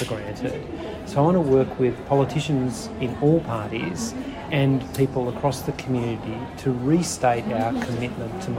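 No technical faults can be heard anywhere in this audio.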